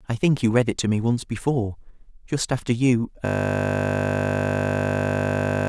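A system hang loop begins at 3.26 s and runs to the end: the system froze while the audio hardware kept replaying one 20 ms slice of speech, 122 times over. The repetition at 50 Hz replaces the speech with a steady, low buzz.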